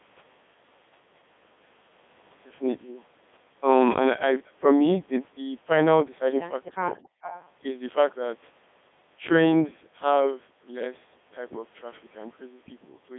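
From start to finish the speech has passed through a Codec 2 vocoder, with heavy damage. Its robotic, buzzy character fits Codec 2's 3.2 kbit/s mode, where only pitch, voicing, energy and a coarse spectral envelope are sent and the decoder rebuilds the sound from sine waves. On a spectrogram, energy sits between about 200 Hz and 3.6 kHz, with smeared, regularly stepped harmonics. The waveform looks smooth and synthetic rather than natural.

From 6.97 to 7.49 s an echo leak is heard: a faint delayed copy of the speech, trailing about 270 ms behind and roughly 15 dB below it. The likely cause is a far-end loudspeaker whose echo canceller failed to remove everything its microphone picked up, so some of it was sent back. On a spectrogram it appears as a weak, shifted ghost of the preceding speech patterns. The waveform shows low-level extra activity overlapping the main signal.

Inside that stretch, from 7.13 to 7.22 s, the background is gated by the echo canceller. 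While the loudspeaker signal was playing, the canceller pulled the microphone down hard, by about 39 dB at its deepest, for roughly a tenth of a second. The room sound briefly vanishes and then returns. A spectrogram shows a thin vertical gap where the noise floor drops to near black, and the waveform shows a short flattened notch.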